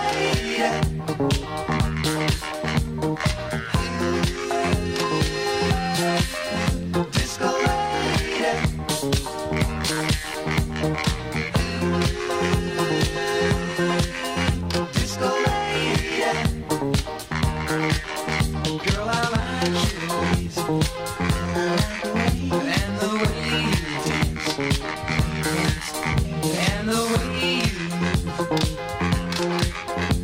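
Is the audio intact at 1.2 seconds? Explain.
Yes, the audio is intact at 1.2 seconds, with no fault at that moment.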